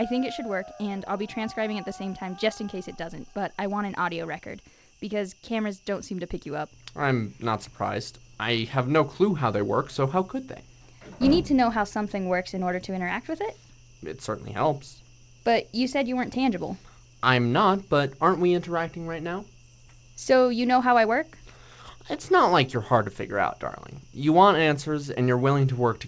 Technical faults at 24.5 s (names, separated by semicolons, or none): none